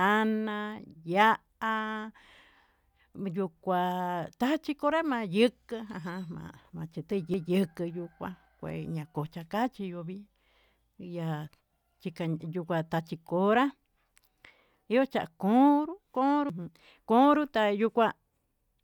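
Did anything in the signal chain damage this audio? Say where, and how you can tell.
Yes. CD skips at 7.34 s and 16.5 s (after "yochan konro") in playback: brief muted ticks as the laser jumps to another spiral turn, displacing the speech.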